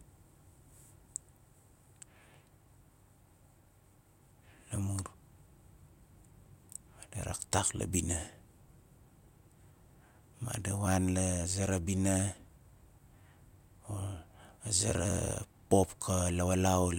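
Nothing in the speech stood out as a technical fault on listening.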